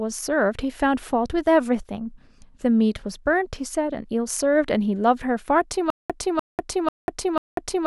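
Stutter with silent gaps, 5.90 s to the end: a 0.30 s burst repeats four times between 0.19 s silences, likely a stalled stream replaying its last fragment.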